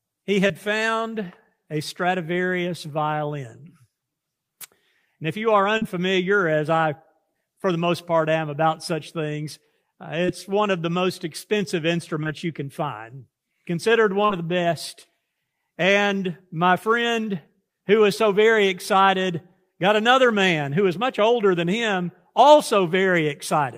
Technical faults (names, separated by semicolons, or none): short concealed packet loss